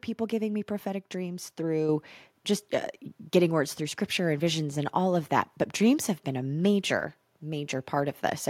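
At 1.89 s, between "giving me prophetic dreams" and "just uh getting words", the microphone volume steps up by about 5 dB. Because the background rises with the speech, this is an input-gain change, not someone talking louder.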